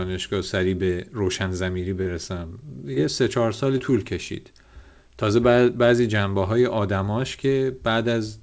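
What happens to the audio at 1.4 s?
Nothing goes wrong at 1.4 s: the speech passes through intact, carried by the call path's G.722 coding at 64 kbps, which leaves nothing above 8 kHz.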